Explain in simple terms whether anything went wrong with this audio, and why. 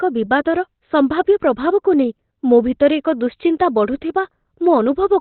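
Something did go wrong, and it lasts the whole clip: the speech sounds muffled and hoarse, with nothing above about 4.3 kHz. That's likely Opus compression squeezed very hard, so it falls back to its narrow speech mode, which cuts the top end and roughens everything.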